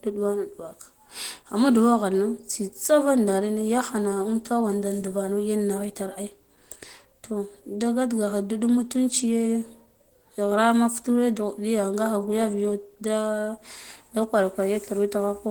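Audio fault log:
Throughout, Opus compression, likely. The speech sounds hoarse and grainy. This fits hybrid mode near 16 kbps, where the encoder uses a speech coder for the lower band.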